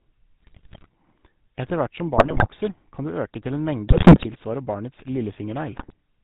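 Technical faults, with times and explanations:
Throughout, GSM full-rate codec: The speech has a buzzy, gravelly roughness from coarse vocal-tract modelling and a sparse pulse excitation, consistent with a 13 kbit/s GSM full-rate stream. On a spectrogram, energy stops sharply at 4 kHz and the harmonics look smeared and grainy.
0.40–0.88 s, 2.17–2.48 s (after "hvert som", before "kan du øke til"), 3.88–4.27 s (after "du øke til en"), 5.76–5.94 s, GSM bit errors: Corrupted filter, pitch and gain values make the decoder squawk, pop and gargle. The waveform shows sudden level spikes, and the spectrogram shows frame-length blocks of distorted, misplaced energy. The first and third bursts are the densest.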